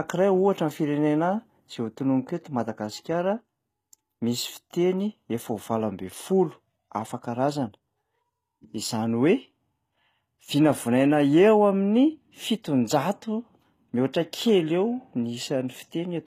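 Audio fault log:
throughout: HE-AAC compression. The speech keeps bright treble up to a hard ceiling at 14.9 kHz, but s sounds turn gritty and lispy, likely from treble copied up from lower bands. Unlike a plain low-pass, the top is present but synthetic, suggesting roughly 20 kbps.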